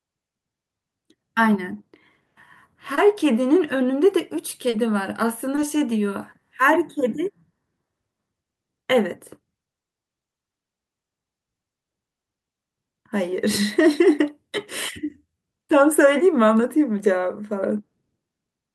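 At 2.95 to 2.99 s, 4.69 to 4.75 s and 5.55 to 5.59 s there's short concealed packet loss. Bits of the stream arrived too late for the decoder, so the receiver papered over each gap, about 20 ms, then 40 ms, then 20 ms, by extending the sound just before it and blending back in. You hear it as quick smears or little wobbles in the speech, and the 40 ms one is long enough that a brief consonant might slip away.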